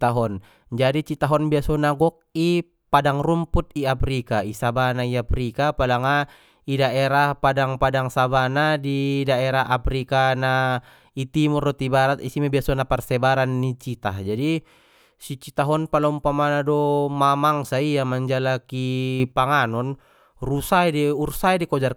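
A sudden gain jump occurs at 19.2 s, lasting to 19.32 s: speech and background noise rise together by about 7 dB in one abrupt step. The likely cause is a digital gain change applied between adjacent samples without a ramp.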